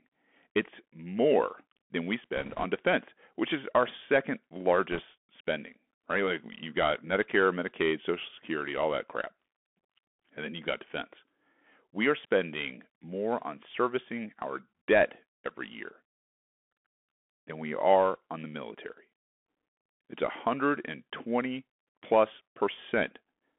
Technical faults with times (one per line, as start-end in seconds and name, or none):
0.00-23.59 Bluetooth CVSD headset codec
2.37-2.65 bit errors on a Bluetooth voice link
4.92-4.99 bit errors on a Bluetooth voice link